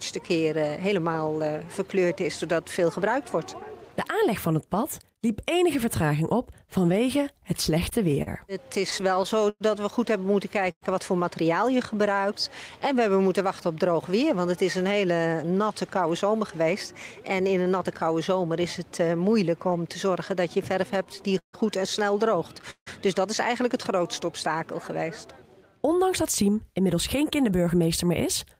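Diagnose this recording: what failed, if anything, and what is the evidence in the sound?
The failure is in the network delivery and the receiver's jitter buffer, which shows up three ways.

Repeated stalls (stutter) come first, from 7.43 to 10.83 s, with 15 short gaps bridged by stretching the last sound, about 0.4 s of fill in all, the longest 110 ms. A second run from 20.94 to 22.88 s has 8 gaps and roughly the same total fill, but the longest reaches 160 ms. Packets were arriving late, so the buffer kept running dry and the receiver held the previous sound until data caught up. Nothing drops out, the audio just hitches and drags.

Right as the first stutter ends, there's a jitter buffer slow-down from 10.59 to 13.30 s. Playback runs at about 97% speed with the pitch unchanged, adding 85 ms as the receiver repeats single pitch periods and slivers of pauses to rebuild its reserve after draining. 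You get a slightly drawn-out, lazy feel there.

Then there's jitter buffer speed-up, from 15.11 to 19.09 s at 106% and again from 26.42 s to the end at 107%. The buffer had overfilled, as happens when late packets land in a bunch, so the receiver trimmed out pitch-period-sized pieces, around a fifth of a second in the first stretch and a bit less in the second. Pitch stays put but the pacing sounds hurried.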